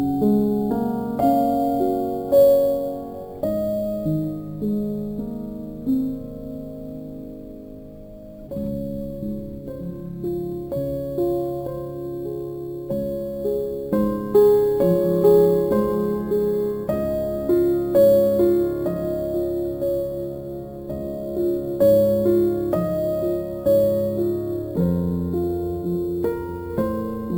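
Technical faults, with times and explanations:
Throughout, imaging from sample-and-hold upsampling: unsmoothed repeated samples mirror the spectrum into 8 to 16 kHz at about 26 dB down, a metallic fizz consistent with 16 kHz raised to 44.1 kHz.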